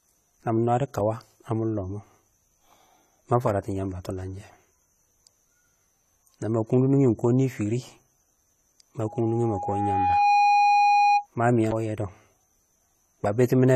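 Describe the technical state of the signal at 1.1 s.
AAC compression is present at 1.1 s, as it is across the whole clip: the speech has plainly audible codec damage and nothing above 14.1 kHz. The likely cause is AAC-LC coding at a low bitrate, around 32 kbps. At that rate the encoder quantises each frame's frequency lines coarsely and drops the top band, so at this moment the speech sounds dull and smeared, with a warbling, fizzy edge on sibilants.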